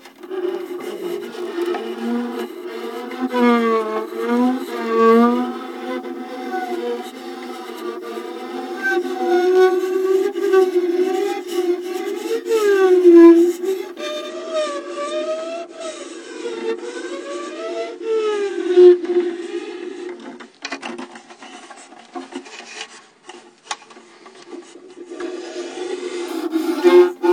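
A recording of everyday sound drops to an adaptive stream at a lower bitrate from 14.28 s to 26.28 s. The quality switches down abruptly with no gap, the treble stops dead above 9.8 kHz, and compression artefacts thicken, a change that fits a fall from roughly 96 to 32 kbit/s AAC. Unlike a dropout, nothing goes missing, and unlike a fixed low-pass filter, the clean sound returns instantly at 26.28 s.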